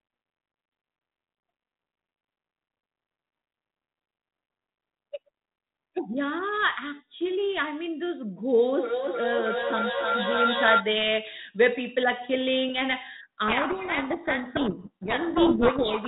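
From 8.64 to 10.86 s there's a feedback echo between two devices: a second phone in the room is playing this line back into the first phone's microphone, and the echo canceller only knows about its own speaker, so the sound returns roughly every third of a second. The repeats come back thinner and ringier, and they build up instead of fading, peaking at about 1 dB above the direct speech.

Then from 13.48 s to the end there's a codec payload misread. The receiver is taking the G.726 code words in the wrong bit order, so every frame decodes as plausible-looking data that's actually scrambled, and the speech sinks under harsh, grinding distortion until the clip ends. Before that, the underlying 32 kbit/s G.726 link only adds light coding damage and cuts everything above 4 kHz.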